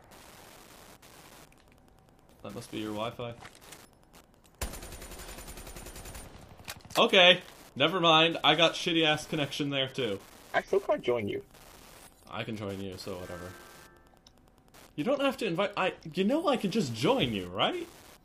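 Wi-Fi interference runs throughout: a nearby radio's beacon, rectified by the audio circuit, ticks every 102.4 ms, roughly 30 dB below the signal.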